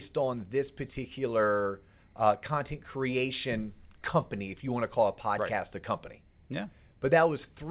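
No technical faults are audible.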